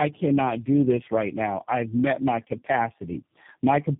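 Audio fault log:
throughout, tandem speech coding: speech sounds rough, muffled and warbly, nothing above 3.7 kHz, from three low-rate codecs in a row (G.723.1, GSM full rate, G.729A), each recoding the previous one's damage.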